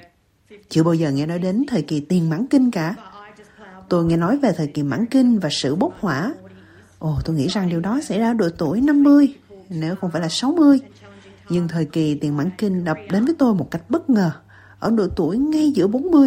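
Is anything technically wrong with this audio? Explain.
No, nothing technically wrong can be heard in this audio. Throughout the clip, nothing stands out to the ear as a problem.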